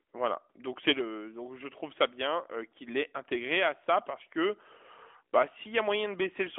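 The speech has the narrow telephone-band character of the AMR narrowband mobile codec, working as it should in what sounds like its 12.2 kbps mode, with the band running from about 300 Hz to 3.5 kHz and nothing above 3.8 kHz, and nothing in the signal points to a fault.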